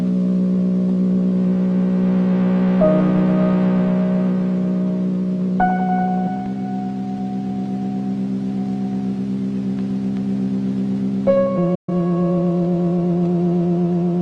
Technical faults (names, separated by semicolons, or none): digital broadcast dropout